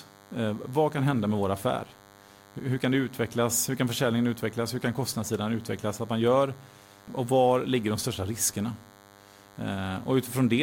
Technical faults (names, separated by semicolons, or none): DECT cordless phone buzz